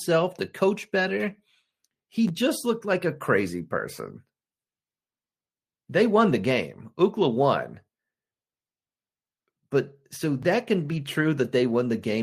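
At 2.28 to 2.30 s there is a brief jumbled flicker, and the same stutter returns at 10.43 to 10.45 s. Both are chunks out of order: a short block of audio, about 11.6 ms long, arrived one chunk late and played after the block that should have followed it. Nothing is missing, but the swapped order leaves three hard joins.

Between 6.29 and 6.31 s the speech turns briefly rough and grainy without any gap. From 10.87 to 10.97 s a longer stretch of about 60 ms sounds the same way. Each is a lost packet rebuilt from error correction. The first points to a single 20 ms packet, and the second to three separate ones. The decoder filled each gap with the low-bitrate copy carried in the following packet, which is why the sound continues but coarser and noisier.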